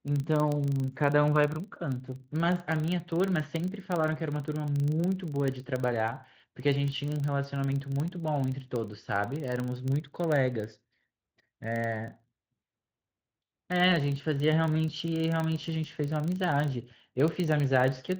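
A filter restarted on every block runs through the whole speech clip. The filter loses its memory at each block boundary and starts again from silence, leaving a small transient every 40 ms. Together these form a 25 Hz buzz that swells and fades with the speech level, on top of the light coding texture from the Speex codec.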